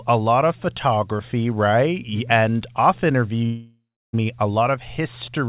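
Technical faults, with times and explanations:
3.46–4.15 s long network dropout: after "off interview" a fading buzz or hiss turns to 0.31 s of silence before "me a"; 0.68 s is lost, far longer than brief packet loss, likely from a network stall.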